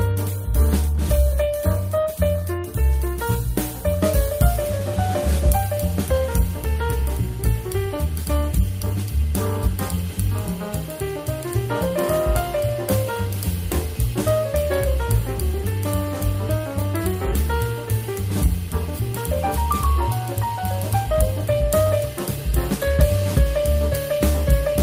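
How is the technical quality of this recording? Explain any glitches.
No glitches or technical faults can be heard anywhere.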